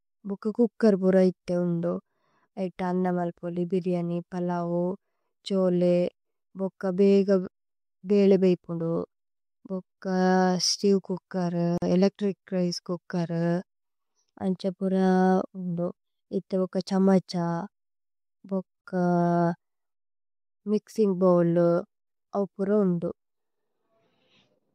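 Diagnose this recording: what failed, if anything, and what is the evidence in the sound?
At the codec stage, a 45 ms gap at a join of encoded pieces opens at 11.78 s, from untrimmed encoder padding. Unlike a dropout, the speech resumes exactly where it stopped.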